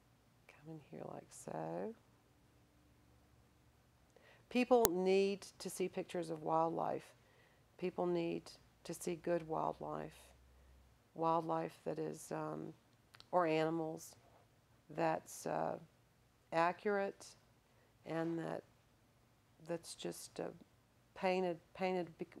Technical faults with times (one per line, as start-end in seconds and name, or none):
4.85 uninitialised buffer